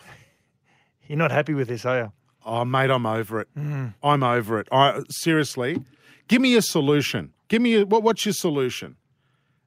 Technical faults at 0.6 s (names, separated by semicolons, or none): none